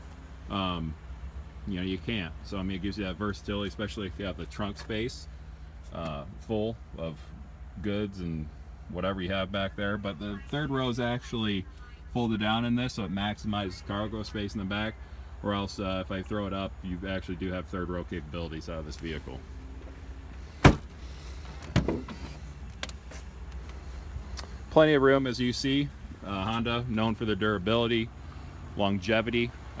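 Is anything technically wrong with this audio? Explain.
No, nothing technically wrong.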